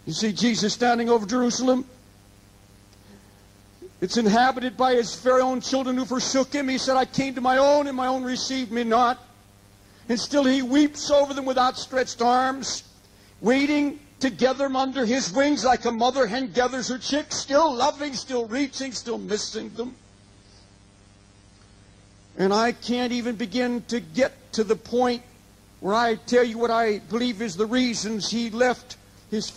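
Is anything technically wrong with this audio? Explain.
Yes. From 14.39 s to 22.39 s the stream drops to a lower bitrate, consistent with an adaptive stream stepping down while the connection slowed. The quality changes abruptly, with no gap, and nothing remains above about 9.9 kHz, so the treble sounds dull, with more smeared, watery codec artefacts. The sound points to AAC at around 24 kbit/s replacing a roughly 96 kbit/s version, which fits the return to the higher-quality version at 22.39 s.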